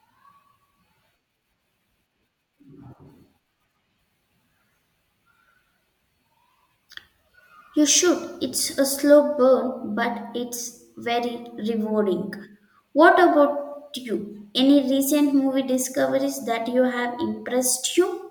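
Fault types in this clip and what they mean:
No technical faults can be heard anywhere in this speech recording. There is therefore nothing to list.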